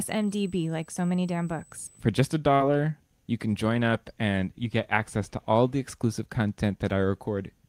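USB whine runs from the start of this speech clip to 2.0 s. It is a steady, high-pitched tone fixed at 8 kHz, sitting roughly 30 dB below the speech. The pitch points to the bus's 125-microsecond microframes. Current drawn in step with each microframe leaks through the shared power or ground into the audio path, so the whine holds one frequency rather than wavering. It stops at 2.0 s.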